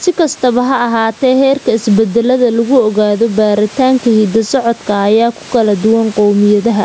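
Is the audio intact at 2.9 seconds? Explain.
No, gain pumping runs through the whole clip, including 2.9 s: background swells between loud sounds and ducks under them by around 10 dB, likely from excess gain hitting a fast limiter, never cutting out like a gate.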